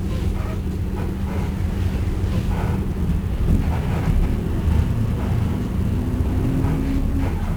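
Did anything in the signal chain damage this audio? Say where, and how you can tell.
Yes, at the codec stage. It's fuzzy and crackly throughout, with treble buried in hiss: 1-bit DFPWM compression, one bit per sample nudging an adaptive level, which fits roughly a 48 kbps stream.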